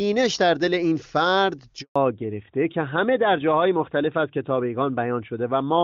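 At 1.82 s the speech drops out in a handover gap: the call switches networks and no frames arrive, leaving 140 ms of silence until 1.96 s. From 1.96 s to the end, a fallback to narrowband removes everything above 4 kHz. Until then, the speech has the clean HD Voice band of AMR wideband near its top rate. Afterwards it sounds duller and rougher, which fits AMR-NB at 12.2 kbit/s.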